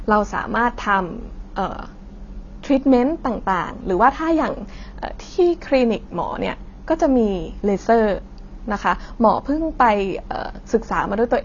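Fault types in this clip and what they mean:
AAC compression: The speech sounds dull and smeared from start to finish, with nothing above 7 kHz. The damage is plainly audible. Sibilants and held sounds take on a warbling, fizzy texture. This is likely a low-rate AAC-LC encoding, one that fits about 24 kbps. At such a rate the encoder pulls its cut-off down to save bits. It quantises what remains coarsely against its hearing model, leaving spectral gaps that shift and swirl.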